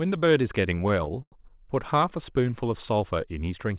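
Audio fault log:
1.22–1.34 s short stall from a late packet: the sound is held for 95 ms with a slight buzz or dip, then resumes unbroken. Unlike a dropout, nothing is cut.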